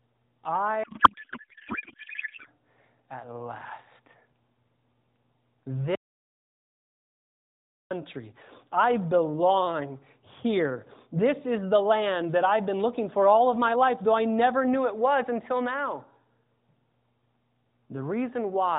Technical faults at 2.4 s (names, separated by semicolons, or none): codec payload misread